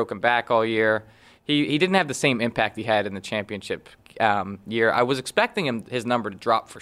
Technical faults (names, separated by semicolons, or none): none